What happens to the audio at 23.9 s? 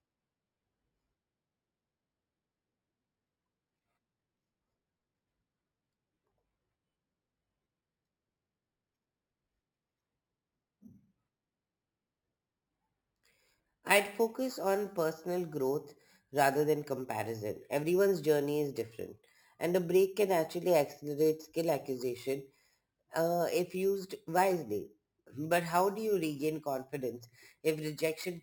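Imaging from sample-and-hold upsampling is present throughout. Unfiltered 12 kHz samples were repeated up to 48 kHz. They mirror into 6 kHz to 12 kHz as metallic fizz, about 19 dB down.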